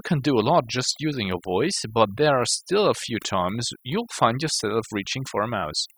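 Overdone noise removal runs throughout: an over-aggressive suppressor strips bands near its noise estimate, leaving near-silent, twinkling gaps.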